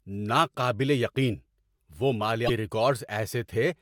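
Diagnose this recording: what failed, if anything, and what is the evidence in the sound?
The fault sits in the codec stage, or really in the compressed file or stream feeding it: damaged data in the compressed stream. From about 2.44 to 2.50 s, roughly 56 ms, the speech gives way to a short glitch that doesn't belong to it. Some bytes in that stretch are wrong, so the decoder misreads or throws out those frames, loses sync, and has to hunt for the next valid frame header before clean audio resumes.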